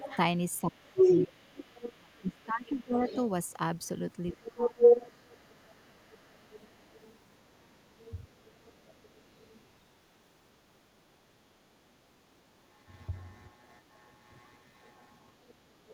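From 0.0 to 3.08 s the talker's speech is pushed down by as much as about 30 dB, in pieces adding up to roughly two seconds. This is speech suppressed in double talk, likely an echo canceller muting both sides during overlap. A second voice, the other side's voice leaking through, is present at the start (0.0–0.18 s, about 10 dB below the speech) and from 0.84 to 3.18 s, about 5 dB louder than the talker. That is likely loudspeaker echo left in the microphone. At 4.34–4.87 s the suppression returns, dipping about 25 dB for half a second, while leakage runs from 4.31 to 7.18 s at about 10 dB down. Fainter leaks follow at 7.99–9.66 s, about 30 dB down, and at 15.41–15.93 s, about 25 dB down.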